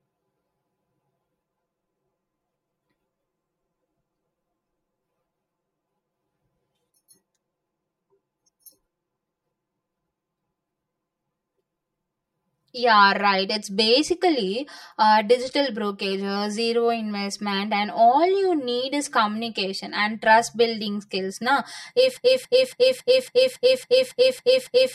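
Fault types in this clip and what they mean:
Channel delay (comb filtering): One channel arrives about 5 ms late, and when both are summed to mono the shared speech cancels at evenly spaced frequencies from around 100 Hz upward. This leaves the whole clip sounding hollow and phasey, with fixed spectral notches.
Broken-record loop: A stall likely left the player or stream resending its last buffered fragment. From 22.17 s to the end, a 0.28 s snippet of speech repeats back to back about ten times, and the speech that should have followed is lost.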